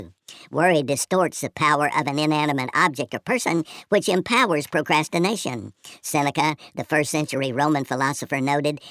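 Throughout the recording, the samples are being played back faster than they were captured, with no conversion between the two rates: a wrong sample rate. The speedup of about 1.45 times fits speech recorded at 22 kHz and played at 32 kHz. Because speed and pitch shift together, the speech runs hurried and rises by about 6.45 semitones, giving voices a high, squeaky, chipmunk-like quality from start to finish.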